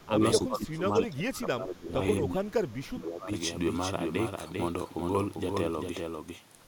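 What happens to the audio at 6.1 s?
At 6.1 s you're hearing the doubled audio track that runs through the whole clip. A second, full-band copy of the speech trails roughly 0.4 s behind, a few dB quieter, with no decay or room colour, most likely a slower capture path picking the signal up twice.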